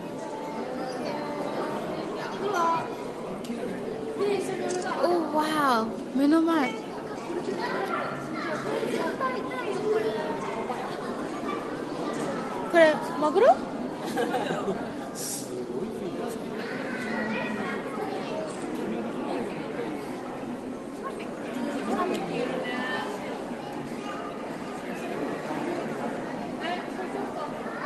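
Nothing here is technically wrong: the sound has simply come over a call link, and its top end stops at around 12 kHz, which fits an Opus connection at a moderate bitrate of around 32 kbps.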